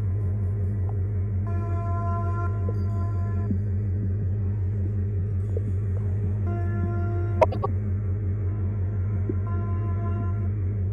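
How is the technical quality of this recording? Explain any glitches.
One glitch stands out. From 7.41 to 7.66 s there is a case of frames out of order. Two adjacent blocks of about 105 ms, which fits four-frame runs, were decoded swapped. The passage plays with its halves exchanged, a garbled flutter. No time is lost.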